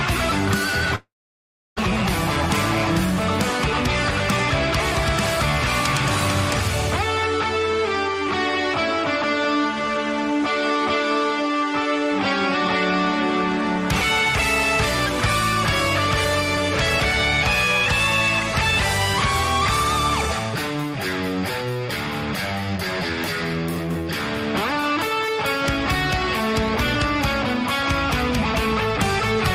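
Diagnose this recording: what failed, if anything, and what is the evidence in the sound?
Network stage. From 0.95 to 1.81 s the sound breaks off. The last sound continues as a fading buzz, then about 680 ms of silence. The sound resumes with roughly 600 ms of material missing. This is likely a long network dropout, concealed by extrapolation until the concealment gave up.

Jitter buffer stage. Between 9.02 and 10.87 s the sound runs about 8% fast with unchanged pitch and a hurried feel. This is a jitter buffer speed-up: the receiver trimmed repeated pitch-period-length pieces, roughly 150 ms in total, to drain excess buffered delay.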